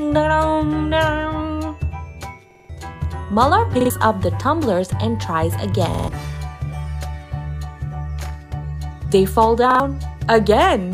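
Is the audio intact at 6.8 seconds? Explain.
Yes, at 6.8 seconds the sound runs on cleanly with no dropout, click, glitch or other fault.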